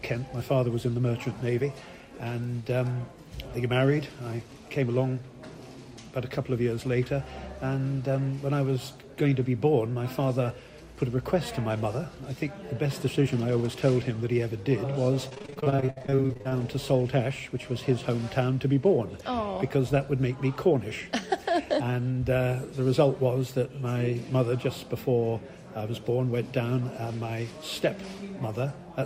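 From 15.29 to 16.53 s, repeated packet loss (robotic sound) sets in: audio arrives late or not at all in quick succession, and each hole, the longest about 62 ms, is bridged by extending the preceding sound. Over 40% of the stretch is filled this way, leaving it choppy with pieces missing.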